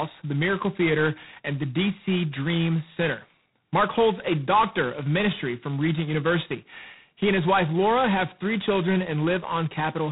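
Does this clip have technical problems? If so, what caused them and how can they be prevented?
Yes. The speech has passed through G.726 ADPCM coding at a very low rate, and the heavy, rasping hiss fits the 16 kbit/s mode. With so few bits per sample to carry the difference from the adaptive prediction, the quantisation error is large, so a harsh grain rides on the speech from start to finish and rises and falls with its level. Nothing above 3.9 kHz survives, leaving the sound narrow and muffled. To prevent it, run the link at G.726's 32 kbit/s rate or use a wideband codec.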